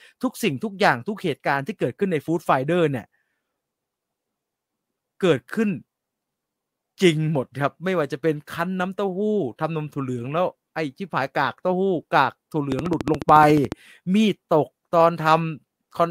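From 12.72 to 13.73 s a rapid, evenly spaced ticking cuts across the speech, about fifteen near-identical clicks at 14 per second, each standing well above the voice. This train of clicks is likely interference from nearby equipment or a faulty connection or power supply injecting pulses.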